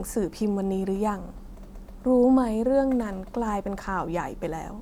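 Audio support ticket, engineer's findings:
Nothing stood out on listening to this speech recording.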